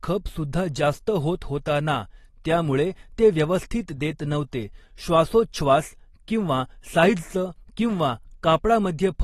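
Speech that has been through AAC compression throughout, likely low-bitrate AAC-LC at around 32 kbps, so nothing remains above 12.4 kHz and plainly audible codec smearing dulls the sound.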